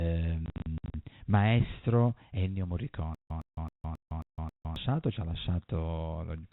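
From 0.46 to 0.94 s, packet loss filled with silence chops the speech. About 260 ms drops out in hard-edged holes up to 60 ms, fitting 20 ms packets.

From 3.15 to 4.76 s comes a stutter with silent gaps. A 112 ms fragment repeats six times, each followed by 157 ms of silence, before "ci ha". A likely cause is a stalled stream.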